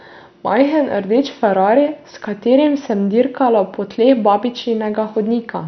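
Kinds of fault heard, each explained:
MP2 compression: speech sounds dull and gurgling, nothing above 6.2 kHz, likely from heavy MPEG Layer II coding near 48 kbps; spectrogram shows flickering, blocky upper bands.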